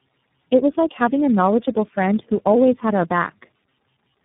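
The call passed through several differently coded network links, each decoding the speech and re-encoding it for the next, so the clip carries tandem speech coding for its whole length. The sound points to about four speech coders stacked in sequence, ending in something like iLBC, each compounding the last one's errors. The speech comes out rough, dull and warbling, with nothing above 3.8 kHz, and it is more damaged than any single narrowband codec would leave it.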